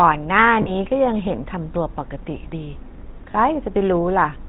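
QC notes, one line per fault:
throughout, GSM full-rate codec: the vocal tract is modelled with sparse pulse excitation and a band ending at 4 kHz, which fits 13 kbps full-rate coding and gives a plainly buzzy, gravelly roughness.
0.62–0.70 s and 3.32–3.35 s, lost GSM frames: the missing data, about 40 ms then 20 ms (two frames, then one), was filled by repeating the last good frame, leaving a brief rough, metallic ring.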